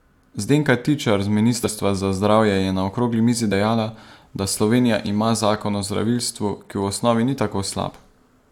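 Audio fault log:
1.63 to 1.69 s, compressed frames skipped: the speech jumps ahead by roughly 100 ms. Whole coded frames never reach the output, either missing or rejected as damaged by the decoder.
3.51 to 3.52 s and 7.87 to 7.91 s, compressed frames skipped: two smaller jumps of roughly 20 ms each, where the audio again skips ahead by the length of the frames left out.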